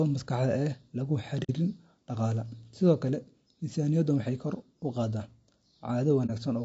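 From start to finish the speech sounds rough and grainy, with noise between the harmonics and a thin, synthetic top band. This fits low-delay AAC compression, likely AAC-ELD at a low bitrate around 32 kbps, whose short frames resolve pitch harmonics poorly.

Just after "ee la", from 1.43 to 1.50 s, the sound fades into a brief soft-edged hole, then fades back. This is AAC frame loss with muting, consistent with two lost frames whose spectrum the decoder set to zero. A shorter hole of the same kind at 6.26 to 6.30 s fits a single lost frame.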